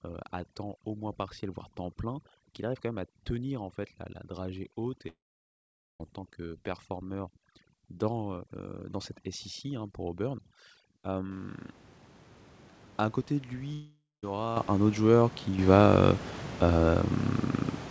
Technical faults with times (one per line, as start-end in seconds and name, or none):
5.08-6.01 long network dropout
13.73-14.24 long network dropout
14.57 microphone volume stepped up
15.59 microphone volume stepped up